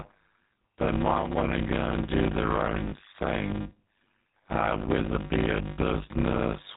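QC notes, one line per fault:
throughout: block size mismatch (padded). Each block gets zero-filled, so there's a steady 100 Hz buzz and everything plays at about 0.53x speed with normal pitch. That fits 256-sample writes into 480-sample reads.
throughout: GSM full-rate codec, plainly audible at 13 kbps. It has that buzzy, gravelly pulse-excited roughness, and nothing gets through above 4 kHz, so the top end sounds dull and boxy.
2.88–2.94 s: lost GSM frames, about 40 ms between "and do their own" and "thing uh whether it". The last good frame gets repeated, so you hear a brief rough, metallic ring.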